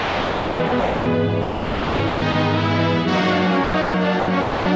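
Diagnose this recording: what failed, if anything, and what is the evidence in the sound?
Sound chopped by the voice detector, in call processing: the audio cuts in and out at 0.00–1.06 s, 1.42–2.34 s, 3.64–3.94 s and 4.20–4.66 s, with synthetic hiss replacing the real background. The likely cause is the sender's voice detector pausing transmission, with comfort noise filling the gaps.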